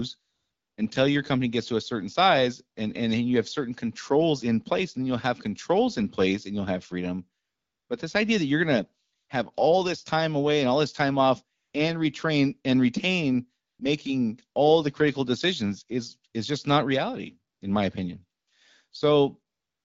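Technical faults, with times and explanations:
0.21 to 19.84 s, AMR comfort noise: nine pauses, from 20 ms to 560 ms long, where the phone stopped sending speech and the receiver substituted smooth synthetic noise. The longest opens the clip before "until your company gets". Short ones sit between "that you're going to" and "have all this time", and after "all this time off". The real background drops out in each gap, while the surrounding wideband speech stays clear.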